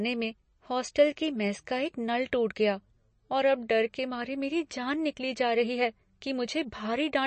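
Right through the clip the speech has that watery, swirly quality of MP3 compression, and nothing comes through above about 8.3 kHz. That's likely an encoder starved of bits, around 34 kbps, cutting the treble and letting weak detail flicker in and out between frames.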